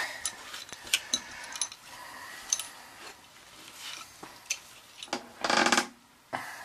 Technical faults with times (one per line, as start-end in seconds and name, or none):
0.73-0.75 loud pop
5.62-5.64 loud pop